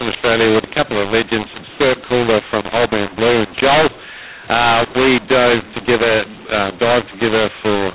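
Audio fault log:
Throughout: mu-law and A-law mixed up. Speech coded as G.711 mu-law is decoded with the A-law curve, so sample levels are scrambled, some too loud, others too quiet, and near-silent samples jump well above zero, giving harsh, distorted speech and noise-filled pauses.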